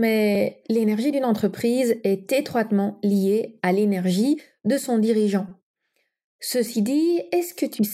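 Repeated buffer at 5.49 to 5.51 s, after "l'énergie de son dirigeant": late audio made one 5.8 ms slice replay four extra times, producing a brief buzz.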